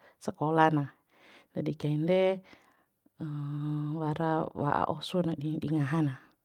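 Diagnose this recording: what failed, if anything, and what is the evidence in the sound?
Between 2.75 and 4.38 s the speech picks up a scatter of brief ticks and small smears, about ten tiny hiccups spread across that stretch while the rest stays clear. This is scattered short gaps at the network stage: individual packets arrived late or not at all, and the receiver's concealment bridged each hole, none longer than about 15 ms, by extending the preceding sound. Around a tenth of a second was filled in total, and the stretch runs about 13 ms longer.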